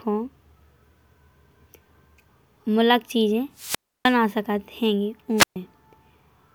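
Wireless microphone squelch dropouts at 3.54 to 4.17 s and 5.37 to 5.56 s: the radio link fades, hiss rises, then the receiver mutes the speech for 0.30 s and 0.13 s.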